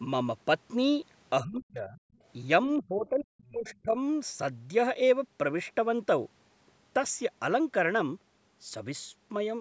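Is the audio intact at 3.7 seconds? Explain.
No. At 3.7 s the speech sits inside a stretch, from 2.79 to 3.97 s, of speech suppressed in double talk. This is likely the echo canceller failing to tell the near talker apart from loudspeaker echo while both sides spoke, so it turned everything down. The result is a deep dip in the speech, at its worst around 40 dB, with about a second of the span audibly pulled down or broken up.

The same moment also has the other side's voice leaking through, from 3.67 to 3.75 s. The echo canceller likely left a residue of the far-end voice from the loudspeaker in the microphone signal. It is heard as a brief, faint scrap of a second voice some 30 dB below the speech.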